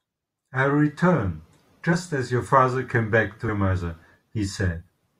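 At 1.92 s and again at 3.48 s, compressed frames are skipped: the decoder jumps past a few 21.3 ms frames, dropping roughly 70 ms and then 100 ms of speech. At each join the speech jumps ahead by the missing audio.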